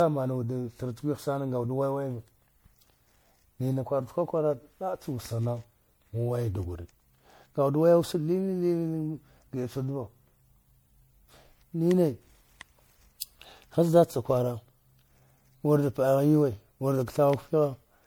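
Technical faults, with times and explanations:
Throughout, generation loss: the speech sounds swirly, hollow and smeared, with blurred consonant onsets, likely from about five MP3 passes near 96 kbit/s, each requantising on a shifted frame grid. A spectrogram shows flickering holes, smeared transients and nothing above 20.9 kHz.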